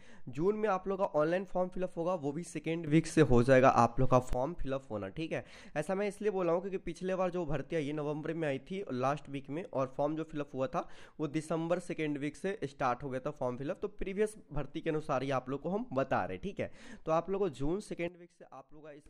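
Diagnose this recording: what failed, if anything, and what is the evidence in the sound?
Sudden gain jumps at 2.87–4.33 s (up about 12 dB) and 18.08–19.06 s (down about 16 dB): sound and noise floor shift together instantly, likely a digital gain change applied without a ramp.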